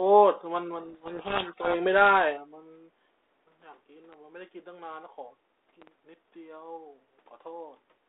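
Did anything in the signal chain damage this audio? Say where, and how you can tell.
Yes. A codec payload misread occurs from 0.8 to 1.75 s, at the codec stage. For that second the speech disappears under harsh, gritty distortion, then clears abruptly. The cause is a mismatch between sender and receiver in the bit order of the G.726 code words. The decoder accepts each frame but reads the bits of every code word in the wrong order, so its adaptive predictor tracks errors instead of the signal. The speech sits inside a band of roughly 300 Hz to 3.7 kHz, which fits G.726 at 32 kbit/s.

Loud pops occur at two points: a single pop from 4.13 to 4.16 s, peaking a little above the speech, and a double pop from 5.82 to 5.90 s, about 10 dB above it. Each pop is a sharp transient laid over the sound, which carries on underneath. Short added pulses like these point to the analogue wiring or the driver. 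The likely cause is a voltage step from a connector, switch or static discharge, which the following circuitry shapes into a brief thump.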